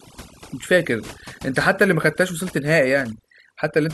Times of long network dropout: none

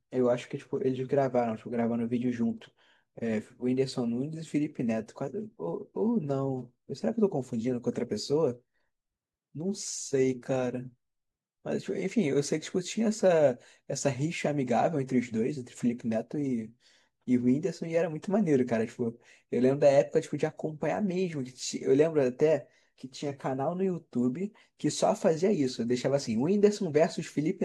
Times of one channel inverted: none

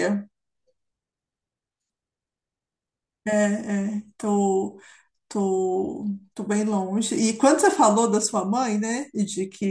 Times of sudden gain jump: none

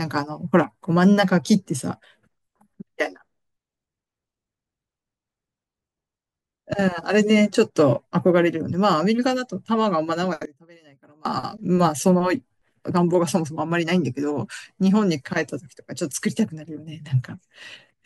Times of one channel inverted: 10.45-11.25

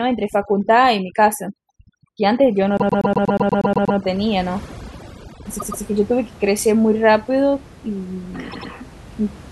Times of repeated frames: 2.77-3.97, 5.58-5.82, 8.51-8.70

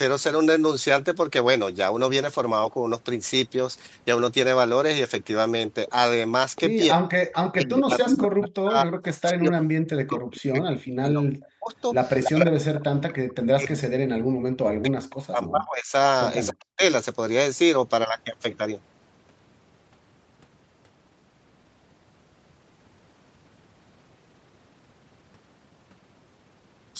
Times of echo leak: 7.32-8.25, 10.32-10.37, 11.43-11.48, 12.22-12.30

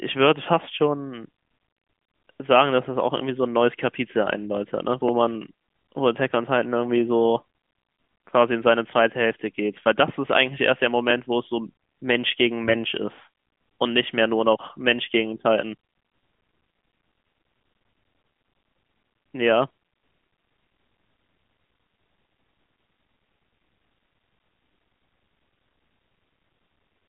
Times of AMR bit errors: 12.64-12.79

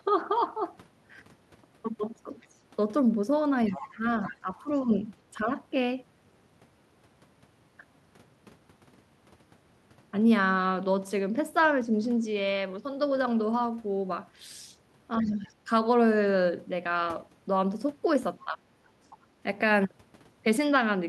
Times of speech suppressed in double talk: 3.69-5.04, 15.19-15.68, 18.45-18.65

